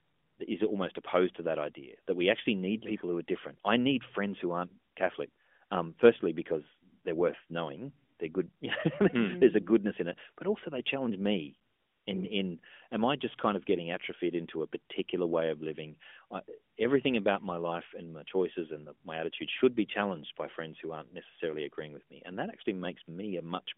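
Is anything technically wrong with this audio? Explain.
No, nothing is technically wrong.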